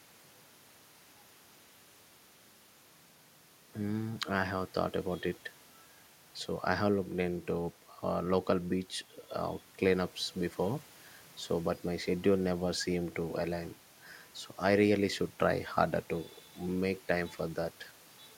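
No technical faults are audible.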